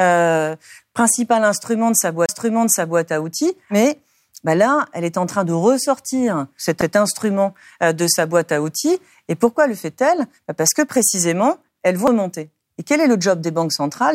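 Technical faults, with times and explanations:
2.26 to 2.29 s and 12.07 s, CD skip: the player's laser lost its track and landed on a different turn of the disc's spiral. The output mutes while it relocks, for roughly 30 ms at the first point and only a few milliseconds at the second. Each skip sounds like a small tick followed by an abrupt jump in the speech, because playback resumes from a different point on the spiral.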